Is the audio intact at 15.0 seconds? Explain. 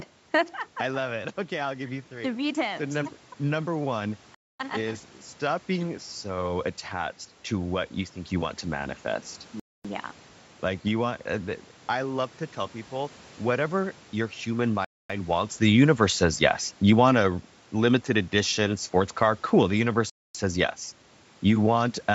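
No. At 15.0 s the sound falls inside a gap between chunks, a hole of silence from 14.85 to 15.10 s, 250 ms long. The audio was delivered in 5 s chunks, and at this join silence was left, leaving dead air rather than dropping sound. It is heard as a short hole in the sound. A change in level around the same moment comes from the talker moving relative to the microphone.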